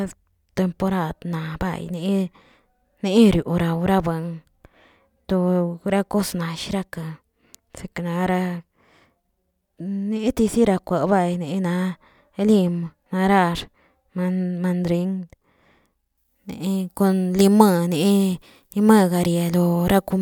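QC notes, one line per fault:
16.18–20.21 s, pre-emphasis left on: from here to the end, the speech turns thin, bright and sibilant. The treble boost applied before transmission was never undone by the matching de-emphasis, leaving 10 kHz about 10 dB above 1 kHz, which fits a 50 µs FM curve.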